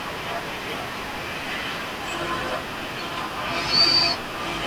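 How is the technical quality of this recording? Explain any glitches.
The technical quality of this recording is sound, with no glitches to explain.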